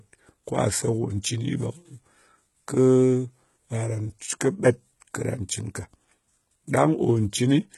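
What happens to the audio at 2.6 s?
At 2.6 s the speech has a gritty, metallic treble, with s sounds turning lispy and nothing above 11.8 kHz. This runs through the whole clip and is likely HE-AAC compression: the upper band is rebuilt by copying lower bands upward, with heavy damage that points to a bitrate near 16 kbps.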